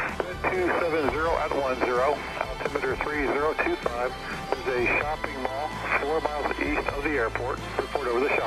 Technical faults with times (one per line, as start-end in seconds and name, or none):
none